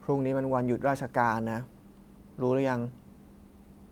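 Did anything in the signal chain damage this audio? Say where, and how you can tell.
No, nothing in the signal chain audibly damaged this speech recording; the level, continuity, bandwidth and timing all hold steady, with no point where any stage leaves a mark on the signal.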